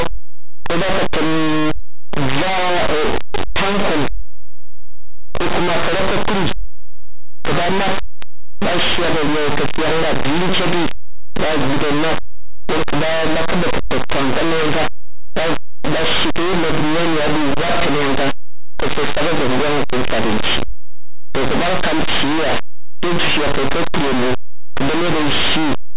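From start to finish, the speech is buried under very loud, harsh distortion. This is linear audio read as companded: plain linear 8-bit samples are being decoded as mu-law codes. Mu-law maps its codes nonlinearly, so small linear values just to one side of zero land on the largest expanded outputs while their neighbours on the other side stay tiny. Quiet passages therefore explode into loud, harsh distortion.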